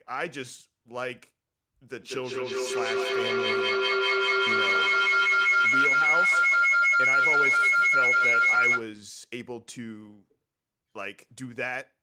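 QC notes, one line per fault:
1.98–8.91 s, feedback howl: a piercing tone around 2 kHz swells until it peaks about 10 dB above the speech, with the loop repeating roughly every 200 ms. Sound circulating between a microphone and loudspeaker in one room gains level each pass, locking onto the loop's favoured frequency.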